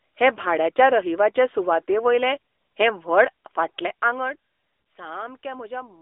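The speech sits behind the AMR narrowband mobile codec throughout: a telephone-line band from about 300 Hz to 3.6 kHz and nothing at all above 3.8 kHz, with a plainly audible buzzy, synthetic edge that fits a mid-rate mode near 10 kbps. On a spectrogram the energy stops at a flat ceiling just under 4 kHz and thins out below 300 Hz.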